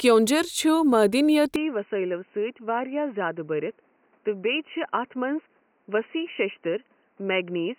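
From 1.56 s to the end, the speech turns dull and boxy with nothing above 3 kHz. It is slightly quieter and carries a new, faint background noise. This is likely an input switched to a poorer device, not simple filtering.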